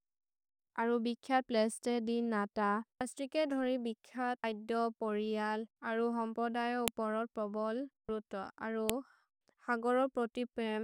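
A sharp, loud click snaps through the speech at 6.88 s, just before "उपरोर् प्रोबोल् रोतो अरु", and again at 8.90 s, right after it. This is a file header played as audio: pieces were joined with their header bytes left in, which then play as samples.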